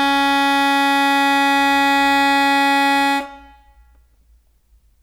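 Nothing in this music clip stands out as a technical fault, so there's nothing to flag here.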